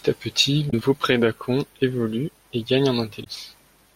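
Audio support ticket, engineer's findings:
Damaged data in the compressed stream: decoder loses frame sync, hunts for the next header. Heard as brief disruptions in the speech at 0.67–0.74 s and 3.20–3.27 s.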